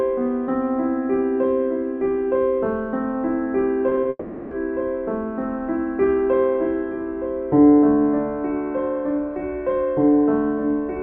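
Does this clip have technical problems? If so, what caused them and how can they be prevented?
Yes. Short concealed packet loss occurs at 3.89, 3.95 and 4.03 s, each about 20 ms of audio missing and filled by the receiver extending the preceding sound, heard as brief smears or wobbles. A jitter buffer with more headroom and forward error correction would prevent it.

From 4.09 to 4.53 s, roughly 0.42 s of sound is replaced by a continuation of the last sound that never falls to silence before the real audio resumes. The likely cause is a long network dropout. A more stable connection or redundant transmission would prevent it.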